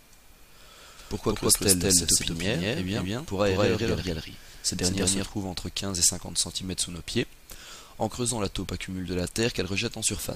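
From 0.99 s to 5.25 s the audio carries a doubled audio track: a second, full-band copy trails the original by about a fifth of a second, at roughly the same level. The copy has no decay or room colouring, so it reads as a hard, flat repeat rather than an echo, and it cuts in and out abruptly at both ends. The likely cause is the signal being captured twice through paths with different latency.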